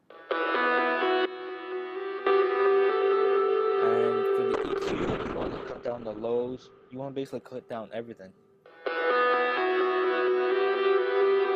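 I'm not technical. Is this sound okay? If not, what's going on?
No. Between 4.55 and 10.49 s there's a call bitrate drop. The connection starved the audio of data, so it sounds rough and muffled until it recovers.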